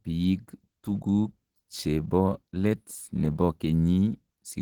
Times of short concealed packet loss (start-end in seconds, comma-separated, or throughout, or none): none